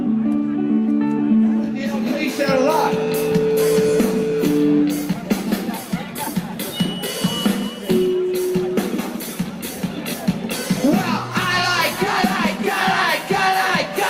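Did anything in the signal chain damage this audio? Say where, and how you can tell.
No, nothing in the chain audibly damaged this audio.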